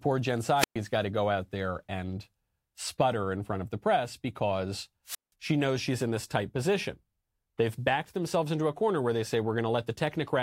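Wireless microphone squelch dropout occurs twice in this speech clip, first from 0.57 to 0.76 s, just before "got to go out", then from 5.06 to 5.32 s, between "of the press because" and "she knows she's in". Each time the radio link from an analogue FM microphone weakened until the receiver's squelch shut the output. A short swell of hiss gives way to a hole of near silence lasting about 118 ms in the first event and 174 ms in the second, before the voice comes back.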